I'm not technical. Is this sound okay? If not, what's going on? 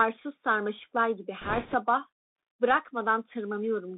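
No. The speech comes through a Bluetooth CVSD headset codec the whole way through. That squeezes it into a thin telephone-like band, roughly 250 Hz to 3.7 kHz, with a grainy hiss underneath and scratchy s sounds. This is different from simple muffling, which sounds dull but stays smooth.

From 1.41 to 1.75 s there are bit errors on a Bluetooth voice link. Some of the data sent over the wireless connection arrived damaged, so a rushing, crackly noise briefly covers the speech. Unlike a dropout or loud clicks, the sound keeps going, just roughened.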